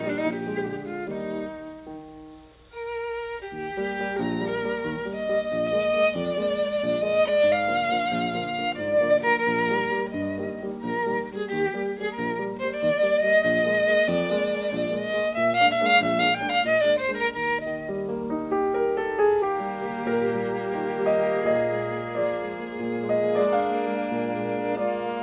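Aliasing runs throughout this music clip, from start to finish. The audio was brought down to a much lower sample rate, which fits a drop from 48 kHz to 8 kHz, without first removing content above the new 4 kHz limit. Everything above 4 kHz folds back below it as false, unrelated pitches, sitting roughly 25 dB under the music. Bright, high sounds come out gritty and metallic, and the spectrum runs hard up to 4 kHz.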